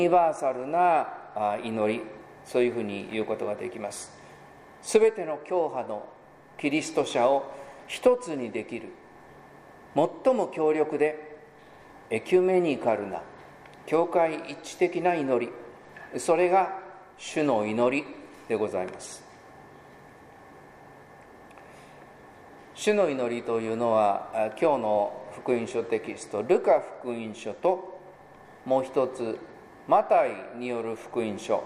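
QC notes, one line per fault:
No technical faults are audible anywhere in this audio.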